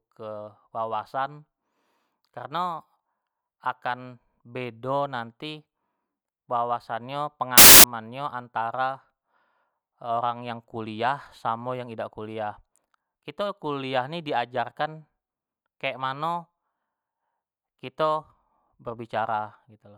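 At 7.58 s the speech gives way to a burst of loud, harsh broadband noise lasting until 7.84 s, a case of samples built from the wrong bytes. The reader misassembled each sample's bytes, so the rapidly fluctuating low-order bits took the place of the high-order ones. On a waveform this span shows as a dense, high-amplitude block. A spectrogram shows broadband energy spread across the frequency range.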